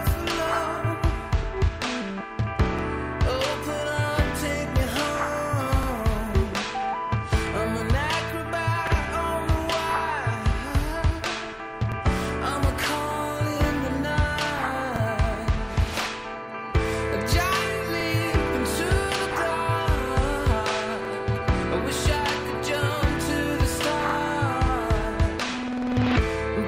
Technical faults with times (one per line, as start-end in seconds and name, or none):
2.79-2.83 overlapping chunks
5.83-5.87 overlapping chunks
8.87-8.92 overlapping chunks
11.92-11.96 overlapping chunks
14.96-15.01 overlapping chunks
18.01-18.05 overlapping chunks
21.05-21.09 overlapping chunks
24.09-24.14 overlapping chunks